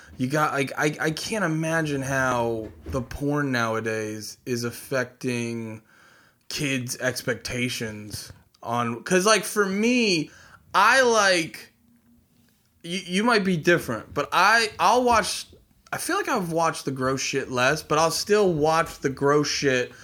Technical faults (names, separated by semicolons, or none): audio missing between chunks